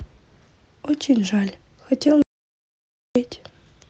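At 2.22 s the speech cuts out in mid-flow and the signal drops to silence until 3.16 s, about 0.93 s with no room tone at all. This audio dropout to silence was likely caused by the input being lost (a disconnected device, failed link or stray mute) while the encoder kept writing silence, so whatever was said in that gap is gone. The call-codec band limit near 8 kHz, which fits Opus at around 32 kbps, applies on both sides of the gap.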